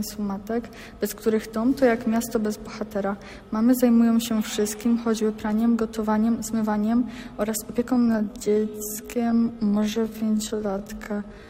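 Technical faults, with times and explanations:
7.90–11.49 s, time-stretched section: from 7.90 s to the end, the pace drops abruptly to about 0.59 times normal speed while the pitch holds steady. This is likely software stretching the audio to fill a length, repeating short overlapping pieces to pad it out, which makes the slowed material drag. On a spectrogram, the harmonics stay at the same heights but every event is drawn out wider.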